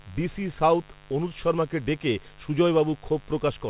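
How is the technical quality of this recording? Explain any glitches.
The speech carries a mains buzz from start to finish. Its bandwidth stops at 4 kHz, which fits a narrowband telephone codec and is not a fault in itself.

The mains buzz runs the whole length of the clip, sitting roughly 25 dB below the speech. Switching spikes coupled in twice per 50 Hz cycle stack up harmonics far into the upper range. That makes it a raspy, edged buzz rather than a smooth, low hum.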